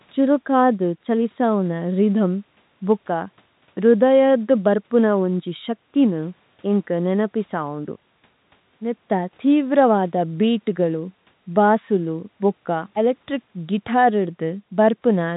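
A recording of speech with no technical fault to be heard. Faint room noise sits about 44 dB below the speech, and the telephone coding keeps everything under 4 kHz, as G.711 does.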